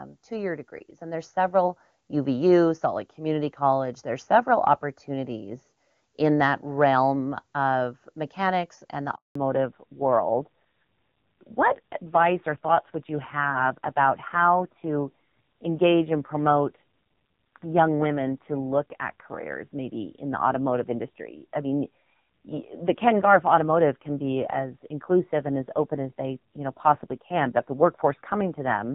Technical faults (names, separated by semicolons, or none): automatic gain rising; handover gap; fallback to narrowband